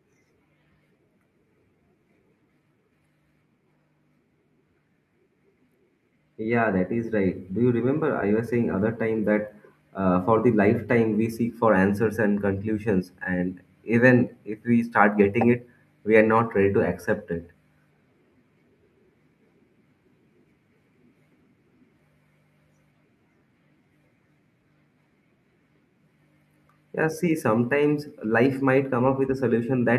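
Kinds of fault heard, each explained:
automatic gain rising: The automatic gain control judged the incoming level too low and slowly turned its gain up, by about 4 dB between 6.37 and 9.31 s. The speech and the background noise swell together over those three seconds, rather than the talker getting louder.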